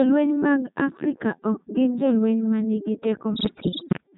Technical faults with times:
0.00-4.18 Codec 2 vocoder
3.34-4.03 bit errors on digital voice radio

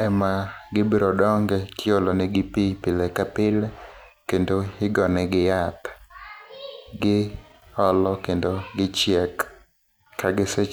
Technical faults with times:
none

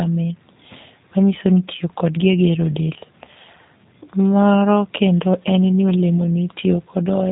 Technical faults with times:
0.00-7.32 G.729 codec

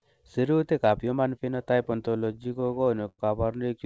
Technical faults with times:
2.06-3.20 repeated stalls (stutter)

